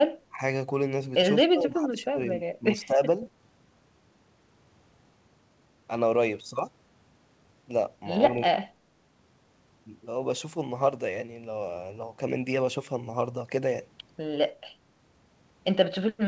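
The speech dips at 0.29–0.4 s, 1.37–2.34 s, 2.59–2.65 s, 2.86–3.0 s and 8.34–8.67 s. It drops by about 10 to 20 dB, deepest in the long second dip. This is likely speech suppressed in double talk. The echo canceller mistook the talker for echo and pulled the level down.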